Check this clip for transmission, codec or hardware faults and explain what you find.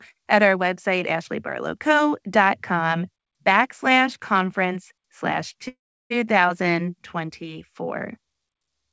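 One transmission fault stands out, a call audio freeze from 5.68 to 6.12 s, right after "backslash conference slash". The sound stretches into a brief fading buzz, then drops to silence for about 0.34 s before resuming where it left off, nothing lost but 0.42 s later. This is likely packets stalling in transit until the jitter buffer emptied and the receiver padded the wait. The audio carries nothing above 8 kHz, consistent with a G.722 call path.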